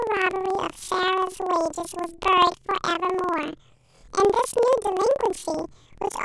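Throughout, the speech has planar audio read as interleaved: each 48 ms block plays twice at double speed, so it sits an octave high with a 20.8 Hz flutter.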